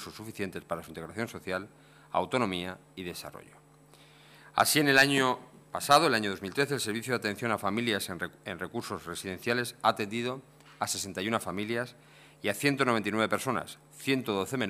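Hard clipping appears twice in this audio, from 4.60 to 5.22 s and again from 5.91 to 5.98 s, each time with the signal driven about 4 dB past what one stage could pass. The peaks are sliced flat, and those square tops generate harmonics high up the spectrum. Soft clipping or a limiter rounds peaks gradually, but here the onset is abrupt and confined to these spans, with edges at the loudest moments.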